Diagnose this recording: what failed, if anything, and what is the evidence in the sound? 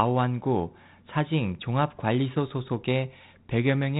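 Nothing failed; no fault is audible in this recording.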